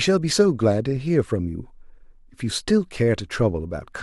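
No technical faults are audible.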